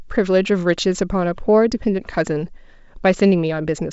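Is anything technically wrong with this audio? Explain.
No, nothing stood out on listening to this speech, which comes across as ordinary G.722 wideband telephone audio with its usual top end stopping a little below 8 kHz.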